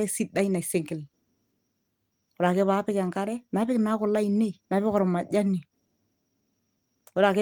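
The speech recording carries no audible technical fault anywhere in the signal.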